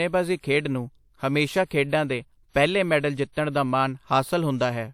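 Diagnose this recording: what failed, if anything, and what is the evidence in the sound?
Pre-echo from the codec stage. Just after "ਖੇਡਾਂ ਦੇ ਪਹਿਲੇ ਮੈਡਲ", a short hiss runs from 3.32 to 3.37 s, about 42 ms, before a sharp attack. The attack sounds smeared. Coding noise meant for the loud onset leaked backward into the quiet moment before it.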